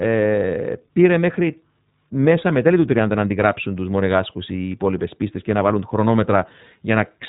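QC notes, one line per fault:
Throughout, iLBC codec: the speech is narrowband, with nothing above 3.8 kHz, and carries a plainly audible rough, synthetic edge. The roughness fits the 13.33 kbps mode's 30 ms frames, each coded without relying on the previous one, so small discontinuities recur at frame boundaries. A simple low-pass filter would dull the sound without this texture, and the frame-by-frame graininess also sets it apart from the smoother blur of other narrowband codecs.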